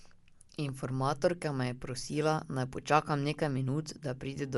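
Dolby Digital compression damage runs through the whole speech clip, plainly audible from start to finish. Nothing is present above about 11.4 kHz, so the speech sounds dull and closed in. Around voiced tones there is a rough, fluttering noise. This points to a low-bitrate AC-3 style encode, which fits a stream near 64 kbps. At that rate the encoder likely narrowed the band and left many frequency lines without mantissa bits, which the decoder then filled with dither noise.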